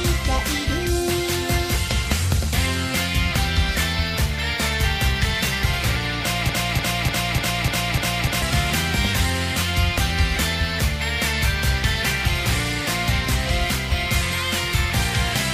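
At 6.49 s the sound catches on a fragment about 0.30 s long and plays it back to back, seven times over, until 8.42 s. That's a broken-record loop. Every pass is identical, so it comes across as a mechanical stutter rather than an echo or a natural repeat. The likely cause is a player, encoder or stream stalling and resending the last chunk it held, so whatever belonged in those nearly two seconds is simply gone.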